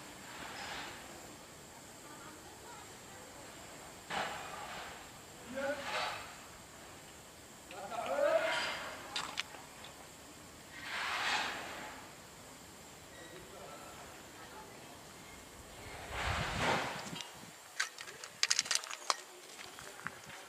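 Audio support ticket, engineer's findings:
No audible faults found anywhere in the clip; nothing to attribute to any component, no action required.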